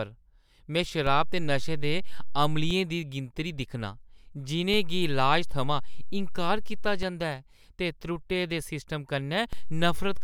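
A speech clip with three DC steps. At 1.07 s the waveform's zero line jumps by about -24 dBFS, heard as a low thump. It returns at 2.71 s with a second thump. Another step of about -25 dBFS comes in at 4.74 s and drops back at 7.03 s. A third, about -24 dBFS, starts at 9.53 s and holds to the end. The speech itself continues unchanged through each offset.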